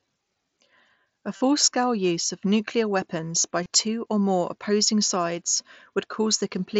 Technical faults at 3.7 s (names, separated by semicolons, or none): concealed Bluetooth headset packet loss